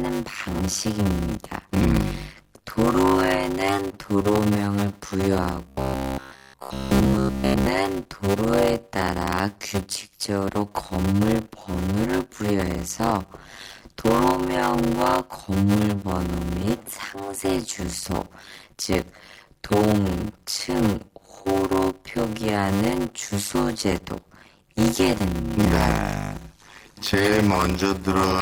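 Speech throughout carries a steady 100 Hz buzz and plays back at about 0.53 times normal speed with its pitch intact, the mark of a block size mismatch (padded): short blocks are zero-filled to a longer read size, which fits 256-sample blocks being read as roughly 480-sample ones. From 5.68 to 7.66 s the speech turns into robotic sound with a rigid, metallic 66.7 Hz buzz. The likely cause is repeated short buffers of about 15 ms filling for late audio, with most of the real signal in that stretch skipped.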